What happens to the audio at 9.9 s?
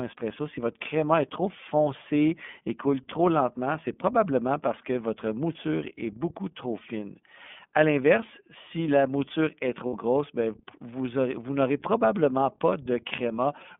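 Right around 9.87 to 9.93 s there's a short dropout from lost iLBC frames, about 60 ms missing, which fits two 30 ms frames going astray in transit. The decoder covers the hole by repeating the last pitch cycle mixed with some noise, so you hear a brief held, slightly buzzy vowel sound instead of a silent gap. Since iLBC codes each frame independently, the voice snaps straight back to normal once real frames arrive again.

All of that sits on top of the iLBC codec itself, which runs through the whole clip with plainly audible damage. The band is squeezed to roughly 200 Hz to 3.5 kHz, so the speech has that thin telephone quality with nothing up top. It also has a rough, faintly synthetic edge from coding each 30 ms frame's excitation on its own, which fits iLBC's 13.33 kbps mode.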